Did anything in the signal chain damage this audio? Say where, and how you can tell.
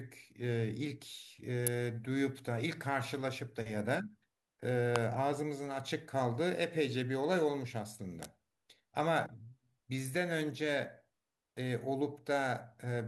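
Yes. The analogue wiring likely picked up an electrical switching spike from nearby equipment, three times. Sharp snaps sit on top of the speech at 1.67 s, 4.96 s (loudest, near -10 dBFS) and 8.23 to 8.25 s, too abrupt to come from the talker.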